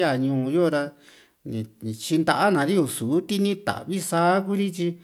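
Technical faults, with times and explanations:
No technical faults detected anywhere in this speech recording.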